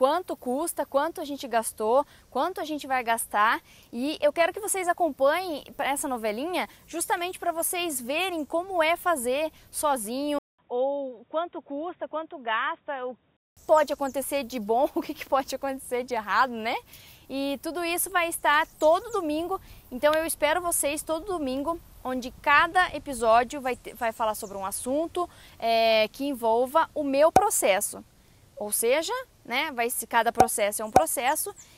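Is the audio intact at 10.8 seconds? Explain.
No. From 10.39 to 13.57 s, a 200 ms gap precedes duller, slightly quieter sound cut off above 3.8 kHz with a faint new noise floor, likely an input switched to a poorer device.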